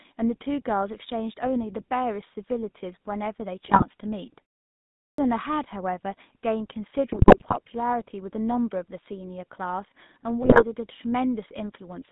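Throughout, the speech carries GSM full-rate codec damage: a band of roughly 150 Hz to 3.7 kHz and a buzzy, gravelly texture from pulse-driven vocal-tract coding, consistent with 13 kbps. From 3.64 to 3.84 s, GSM bit errors corrupt filter, pitch and gain parameters, producing squawks and gargling bursts. At 5.05 s there is a clipped start after a pause: following a 0.67 s gap, the output wakes late, swallowing 133 ms so the sound begins abruptly. Further GSM bit errors hit 7.12 to 7.55 s and 10.42 to 10.64 s, again as pops and distorted level jumps.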